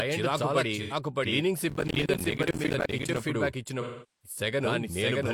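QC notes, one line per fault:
Throughout: doubled audio track. The whole speech clip is heard twice, with a second full-band copy trailing about 0.7 s behind at roughly the same level. It has no decay or room colour, so it reads as a clean repeat and not as an echo. This likely comes from the audio being captured a second time by a slower path, or from an edit holding two copies out of step.
0.82–0.93 s and 3.81–4.37 s: AAC frame loss with concealment. The first gap is short, about 85 ms, and sounds like a smeared, noisy, phasey patch. The second lasts about 430 ms, long enough to sag towards silence before the sound fades back in. In both places compressed frames went missing, and the decoder rebuilt the gap from the last good spectrum, fading it down as the loss went on.
1.70–3.19 s: processor overload crackle. A gritty tearing rides over the sound for about 1.5 s, then stops. The processor couldn't finish its small audio buffers in time, and many deadlines were missed one after another. 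Each miss dropped a short slice of silence with hard edges, and the tiny gaps fit buffers of roughly 10 ms. Dozens of these dropouts close together fuse into continuous crackle.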